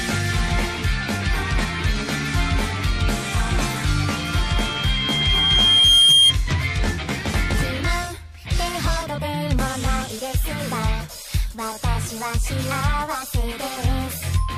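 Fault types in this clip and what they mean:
Loudspeaker feedback squeal: a microphone hears the loudspeaker it drives, and at 3.2 kHz the loop gain goes above one, so that frequency feeds on itself. From 4.16 s a single tone swells over about two seconds to roughly 10 dB above the rest of the sound, then stops at 6.34 s. Unlike a steady whistle or interference tone, it starts from nothing and keeps growing before cutting off.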